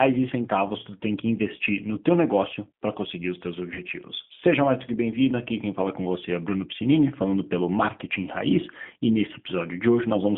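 Throughout, the G.729 codec confines the speech to roughly 150 Hz to 3.5 kHz and adds a rough, synthetic texture, not mere muffling, which fits 8 kbit/s coding. From 3.74 to 3.81 s, VoIP packet loss concealed by the speech codec replaces about 20 ms, roughly one packet, with a fading extrapolation instead of silence, and the speech stays weak briefly afterwards.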